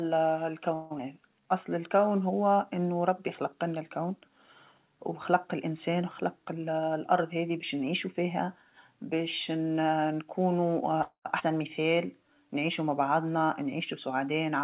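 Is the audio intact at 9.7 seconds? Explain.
Yes, the speech at 9.7 s is intact, with no dropout, click or other fault at that moment.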